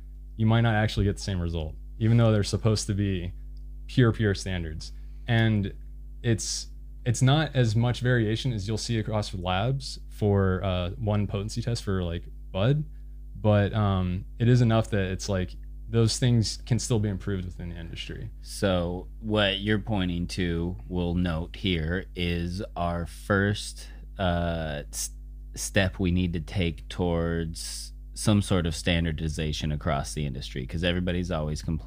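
From start to finish, mains hum sits under the speech as a steady 50 Hz tone, roughly 15 dB below the speech level. Power-line current has coupled into the signal path through a ground loop or a nearby transformer, leaving a constant low drone.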